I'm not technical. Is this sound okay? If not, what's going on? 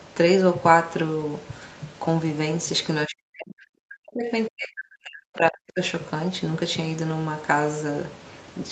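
No. Between 3.07 and 4.31 seconds, and again from 4.49 to 5.8 seconds, the voice sinks far down and partly cuts out. This is speech suppressed in double talk: likely both sides spoke at once, and the call's echo canceller turned this talker down along with the echo.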